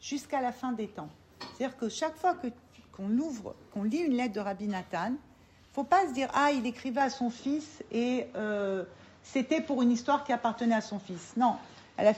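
At 7.01 s the sound changes abruptly and stays changed to the end. There is no gap at the change. From here nothing is heard above 7.6 kHz, so the top end turns dull. The level shifts by a few decibels. A faint new background noise appears, well below the signal. The likely cause is an input switched to a poorer device partway through recording. That device has a narrower band, a different level and its own noise.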